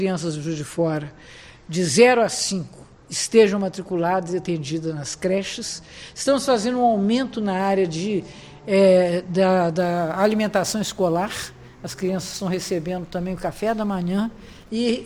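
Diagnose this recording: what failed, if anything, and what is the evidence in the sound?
Crude rate conversion from 9.78 to 14.70 s: gritty inharmonic fizz about 25 dB down, riding loud highs. Nearest-sample resampling, likely 44.1 to 48 kHz.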